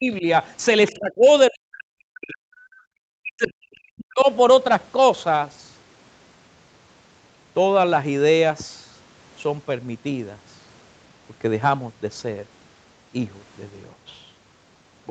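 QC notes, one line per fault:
0.0–0.25 s, 0.91–1.28 s, 1.5–2.51 s, 3.09–4.27 s, speech suppressed in double talk: the speech dips by about 15 dB, then about 20 dB, then about 40 dB in the last two runs. This is likely an echo canceller mistaking the talker for loudspeaker echo while both sides spoke, and turning everything down.
0.87–0.92 s, other side's voice leaking through: a brief scrap of a second voice sits about 25 dB below the main speech. This is likely far-end sound from the loudspeaker that the echo canceller left in the microphone signal.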